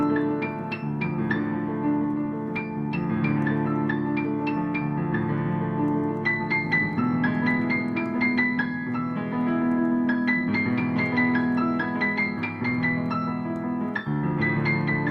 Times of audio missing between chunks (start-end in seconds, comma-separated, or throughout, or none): none